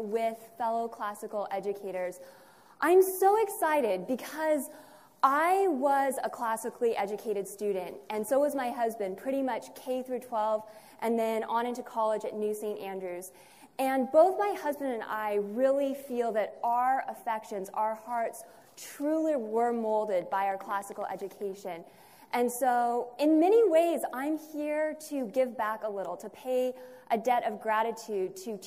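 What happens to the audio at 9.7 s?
Nothing goes wrong at 9.7 s; the audio there plays through intact, with no dropout, click or other fault.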